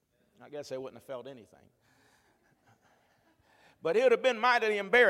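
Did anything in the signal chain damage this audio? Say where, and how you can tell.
No, nothing in the chain damaged this speech audio.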